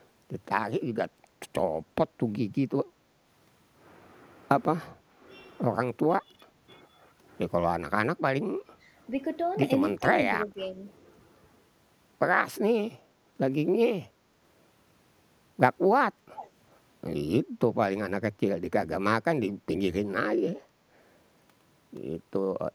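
Speech recording with echo-canceller trouble. Background gated by the echo canceller appears twice, from 4.9 to 5.24 s and from 8.65 to 8.94 s, where the room sound drops by about 13 dB and then about 10 dB before recovering. On a waveform the noise floor visibly sinks; on a spectrogram the background haze pales into a short vertical band. Speech suppressed in double talk follows. There is a brief dip at 9.98 s of around 15 dB and another from 10.44 to 10.8 s of roughly 10 dB, likely where the canceller, hearing both sides, turned down the talker too. The waveform envelope pinches in, and the harmonic stripes fade or break. An echo leak sits at 16.37 to 16.5 s: a faint copy of the speech trailing by about 0.37 s and well over 10 dB quieter, likely loudspeaker pickup the canceller missed. On a spectrogram it shows as a weak shadow of the preceding pattern, shifted right.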